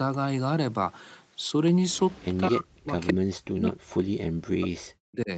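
Speech, with two faults. Between 1.9 and 2.37 s a faint delayed copy of the speech trails it by about 204 ms, about 25 dB down, and a shorter, louder burst returns at 3.07 to 3.13 s, only about 10 dB below. This is an echo leak, likely from a far-end loudspeaker whose echo canceller let part of the pickup return. From 2.49 to 2.95 s and again from 3.13 to 5.3 s the speech dips and breaks up, falling by as much as roughly 40 dB. This is speech suppressed in double talk, likely the canceller attenuating the talker while both sides spoke at once.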